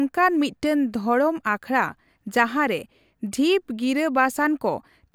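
Nothing in the speech stood out as a technical fault on listening.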